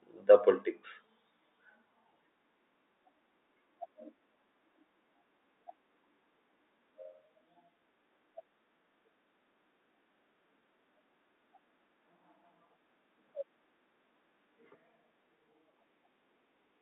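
No technical faults can be heard anywhere in the speech. It has the narrow band of ordinary G.711 telephone coding, running from about 250 Hz to 3.7 kHz, as a fixed-line call would.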